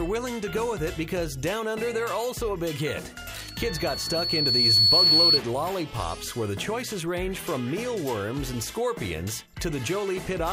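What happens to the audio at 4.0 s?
At 4.0 s a microphone is picking up the loudspeaker it feeds, and at 4.4 kHz the gain around that loop exceeds one, so that frequency keeps reinforcing itself. The result is a loudspeaker feedback squeal from 3.38 to 5.40 s: a single high, piercing tone that swells over roughly a second and a half until it stands about 10 dB above the rest of the audio, then ends.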